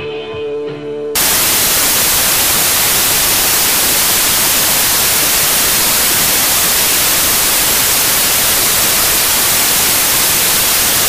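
From 1.15 s to the end, the audio turns into loud, harsh broadband noise. These are samples built from the wrong bytes. The reader assembles each sample's bytes in the wrong order or alignment. The rapidly changing low bits land in the high positions and dominate every value.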